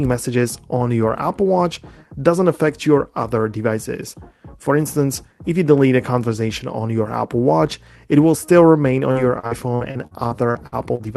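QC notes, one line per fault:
9.11–11.02 s, repeated packet loss (robotic sound): the call stream kept losing or delaying packets, leaving ten gaps of up to 52 ms, each patched by extending the last sound. About a fifth of the stretch is filled-in, so the sound turns choppy, with pieces missing.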